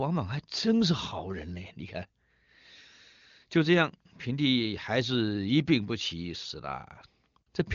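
No technical faults occur at any point in this speech, which has the band-limited sound of the AMR wideband (HD Voice) codec, with nothing above 7.2 kHz.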